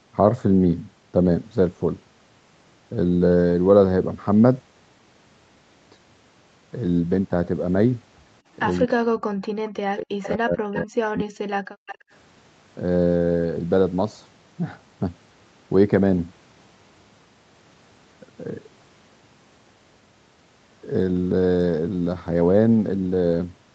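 From 8.86 to 9.46 s and again from 9.76 to 11.52 s the speech sinks by something like 40 dB in places, thinning and breaking up. That's speech suppressed in double talk, likely the echo canceller clamping down because both ends were talking at once.

Inside that stretch, at 10.22 to 10.29 s and 10.75 to 10.84 s, short faint scraps of the speech come back about 250 ms late, sitting roughly 15 to 20 dB under the main level. A third scrap follows at 11.86 to 11.98 s. That's echo leak, likely the far end's canceller letting some of its loudspeaker pickup slip back down the line.

Right around that last scrap, from 11.8 to 12.11 s, the room tone briefly drops out by about 40 dB and then returns. That's background gated by the echo canceller, which shut the microphone down hard while the loudspeaker was playing.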